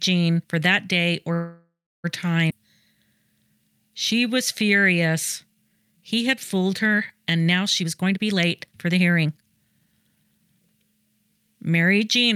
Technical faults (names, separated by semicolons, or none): call audio freeze; skip ahead; jitter buffer slow-down; jitter buffer speed-up